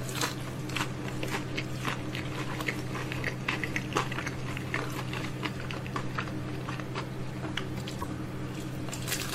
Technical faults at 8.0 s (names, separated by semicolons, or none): damaged data in a compressed stream